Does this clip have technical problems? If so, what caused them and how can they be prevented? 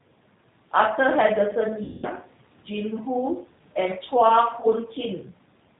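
Yes. Throughout the speech, the G.729 codec is plainly audible. Nothing above 4 kHz survives, and the voice is rebuilt from a vocal tract filter and a few pulses per frame, giving a rough, slightly synthetic texture. It sounds like 8 kbit/s G.729A. Using a wideband codec such as G.722 or Opus avoids this.

VoIP packet loss concealed by the speech codec occurs at 1.84–2.07 s and 4.60–4.67 s. In those gaps the decoder repeated its last pitch and filter with falling gain, so the speech turns into a buzzy tone or coloured noise that fades, lasting longest across the first gap. A jitter buffer, forward error correction or a more reliable network path reduces these dropouts.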